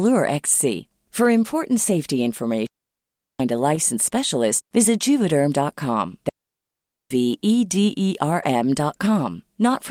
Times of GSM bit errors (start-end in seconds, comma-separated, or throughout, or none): none